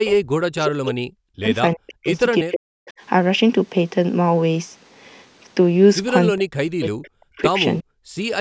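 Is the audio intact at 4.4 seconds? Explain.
Yes, the speech at 4.4 seconds is intact, with nothing beyond the normal call microphone processing, which cuts off everything above 8 kHz and trims the lowest bass.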